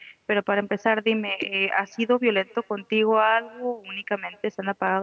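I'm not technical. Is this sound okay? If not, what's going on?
No. Throughout the speech there is an echo with no canceller: the far end's loudspeaker is feeding back into its microphone, so every phrase returns roughly a fifth of a second later as a faint, thin copy trailing behind the original.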